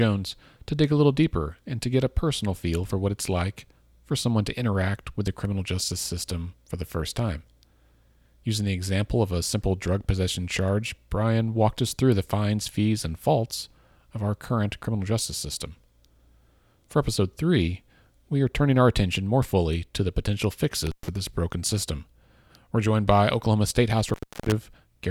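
Intermittent contact breaks the speech twice. At 20.86 s, after "fully to the potential", the signal drops for about 117 ms, returning before "this broken system". At 24.08 s it drops again, for about 322 ms. A loose cable or plug briefly opened the line. Crackle marks each edge, with faint hiss in the gap.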